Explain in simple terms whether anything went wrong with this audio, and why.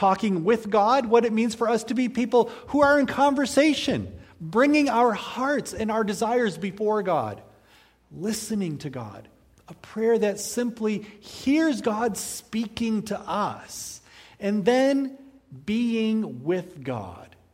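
Nothing went wrong here; the audio has no faults.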